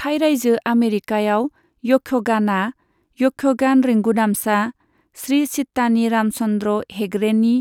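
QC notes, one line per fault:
No technical faults can be heard anywhere in this speech recording.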